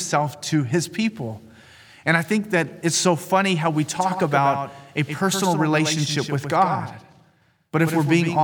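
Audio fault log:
3.97 s to end: doubled audio track. Right after "so funny how we", a second full-band copy of the speech cuts in abruptly, trailing by about a tenth of a second and around 10 dB quieter, with no decay or room colour, likely from a slower second capture path.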